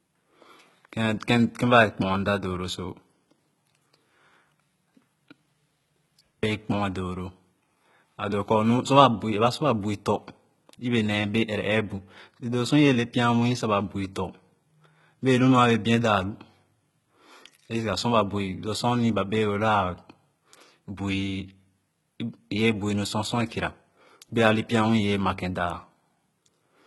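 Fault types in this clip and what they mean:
HE-AAC compression: Throughout the speech the treble above a low crossover is rebuilt from copied lower bands rather than coded, so s sounds come out gritty and lispy, with heavy damage likely from a bitrate near 16 kbps. A spectrogram shows repeated, smeared upper bands ending sharply around 11.8 kHz.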